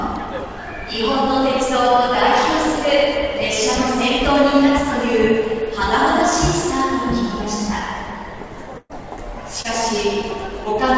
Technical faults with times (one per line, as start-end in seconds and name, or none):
8.78-8.97 burst of packet loss
9.62-9.67 short concealed packet loss